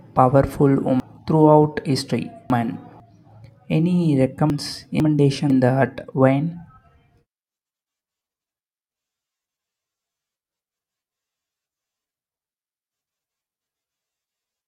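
Speech with chunks out of order at 1.0 to 3.0 s and 4.5 to 5.5 s. A 500 ms chunk plays three chunks late, then one late. The sound jumbles at the hard joins.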